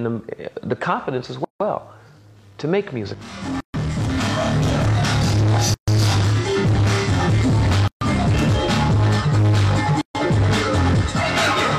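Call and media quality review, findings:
Gap at a join of encoded pieces: segments encoded separately, concatenated without trimming encoder start delay or last-frame padding. Result: short dropouts in continuous sound at 1.44–1.60 s (about 160 ms), then 3.60–3.74, 5.74–5.88, 7.88–8.01 and 10.01–10.15 s (about 136 ms each), repeating every 2.0 s. Edges smeared by the codec; sound resumes where it stopped. Probable component: segmenter/concatenation stage.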